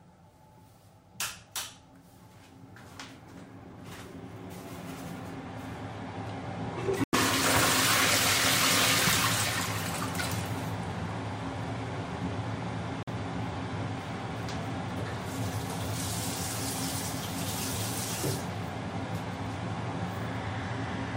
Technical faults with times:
7.04-7.15 corrupt frame muted
13.03-13.08 corrupt frame muted

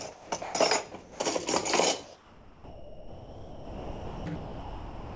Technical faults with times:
0.12-0.54 sound dropped by the voice detector
1.02-1.20 sound dropped by the voice detector
2.04-5.16 sound dropped by the voice detector

